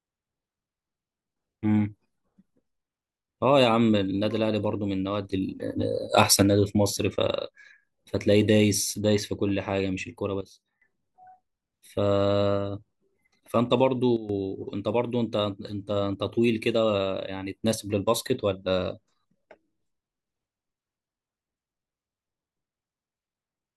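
Speech with three sudden gain jumps: up about 6 dB from 5.25 to 6.42 s, down about 15 dB from 10.41 to 10.82 s, and down about 12 dB from 14.17 to 14.29 s. Voice and background shift together, likely from unramped digital gain changes.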